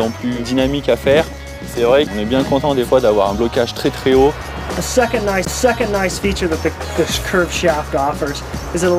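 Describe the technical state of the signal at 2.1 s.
A CD skip at 2.07 s: the laser lost its track and jumped to another turn of the spiral, so playback mutes very briefly, ticks, and resumes from a different place.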